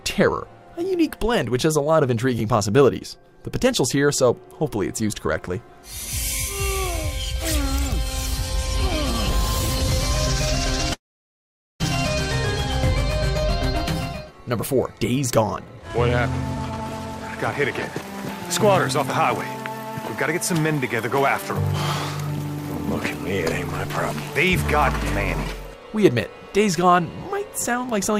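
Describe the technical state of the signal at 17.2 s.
Jitter buffer speed-up, 16.42 to 18.09 s: short pitch-period slices are removed to drain an overfull buffer, so the sound runs at 120% speed, same pitch, hurried.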